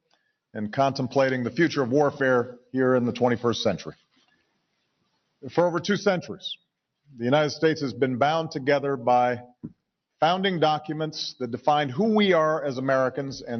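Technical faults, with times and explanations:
3.91–5.43 s and 9.52–9.81 s, sound cut by the noise suppressor: the suppressor judged these stretches of the sound to be background noise and pulled them down by up to about 22 dB, so the audio sinks for roughly one and a half seconds, then briefly again.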